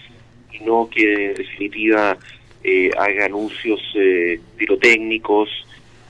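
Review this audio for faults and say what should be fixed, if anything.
Nothing here needs fixing; no faults were found.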